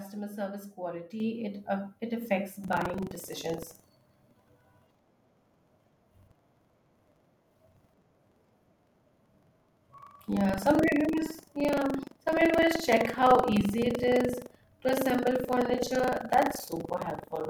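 At 1.2 s the microphone volume steps up by about 7 dB in a single jump, as the input gain on the capture device is raised at once. Speech and background noise both become louder together, with no gradual ramp.

From 2.6 s to the end, buffer tearing sets in. The writer and the hardware reader of the ring buffer have drifted until they cross inside each period, so roughly a tenth of every buffer carries audio from about a tenth of a second earlier, spliced in with abrupt joins. The result is a steady robotic rattle at 23.4 Hz, which fits a 2048-sample buffer, riding on the speech whenever signal is present.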